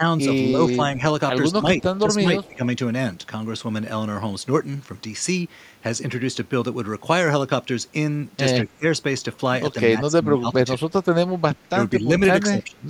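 From 0.51 to 1.03 s, 1.53 to 1.7 s and 2.05 to 2.63 s, the speech dips in level in short patches, by about 5 to 10 dB. This is speech suppressed in double talk, likely an echo canceller that turned the near talker down along with the loudspeaker echo while the far side was also talking. The same pattern returns at 8.64 to 8.84 s, 10.01 to 10.87 s, 11.71 to 12.21 s and 12.46 to 12.86 s, now dropping by up to about 20 dB, deep enough that parts of the speech briefly thin out toward gaps.

Inside the third dip, from 2.43 to 2.54 s, a faint delayed copy of the speech trails the original by 204 ms, roughly 30 dB below it. This is an echo leak. The likely cause is that the far end's echo canceller did not fully remove its loudspeaker pickup, so a short, quiet scrap of the talker's own voice came back.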